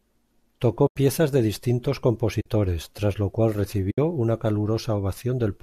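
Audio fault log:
0.87–0.96 s, 2.41–2.46 s, 3.91–3.98 s: AAC frame loss with muting. Silent holes of 90, 50 and 70 ms fade out and back in smoothly, unlike a hard dropout. The zeroed spectrum is blended through the overlapping windows, and the gap lengths fit the roughly 10 ms frames of the low-delay AAC likely in use.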